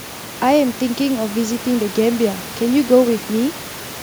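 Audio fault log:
There is no fault.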